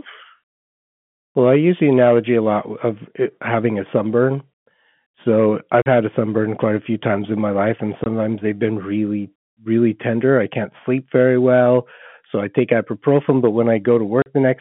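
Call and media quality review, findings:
Packet loss filled with silence: hard dropouts with hard edges at 5.82–5.86 s (just before "had a sunburn quite"), 8.04–8.06 s (between "in my life and" and "they've been really really"), and 14.22–14.26 s. The 40, 20 and 40 ms gaps fit whole 20 ms packets going missing. The receiver just plays silence in their place, no concealment. Check the jitter buffer and PLC on the narrowband G.711 leg.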